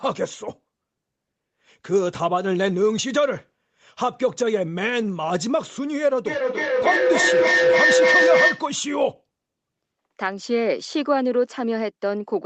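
From 6.26 s to 8.75 s a feedback howl builds as the sound circles between loudspeaker and microphone, gaining on each pass. Unlike an echo, the repeats, about every third of a second, grow rather than fade, narrowing to a tone near 500 Hz that peaks about 5 dB above the speech.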